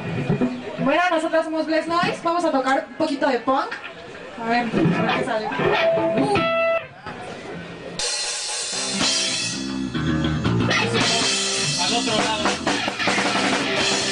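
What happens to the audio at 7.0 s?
Right around there you get a sudden gain jump. From 6.78 to 7.07 s the level drops abruptly by about 11 dB, then snaps back up. The sound and the background noise fall and recover together, with no fade on either edge. That step-like change, over a stretch of roughly 0.29 s, likely comes from a digital gain setting or bit shift being applied instantly from one sample to the next instead of being ramped in.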